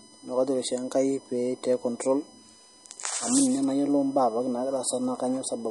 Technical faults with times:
0.00-5.71 USB whine
0.00-5.71 MP3 compression

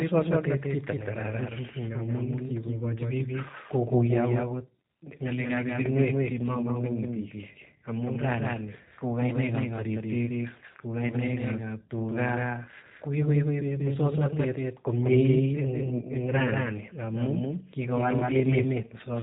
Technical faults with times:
0.00-19.23 doubled audio track
0.00-19.23 G.729 codec
5.82-5.86 VoIP packet loss concealed by the speech codec

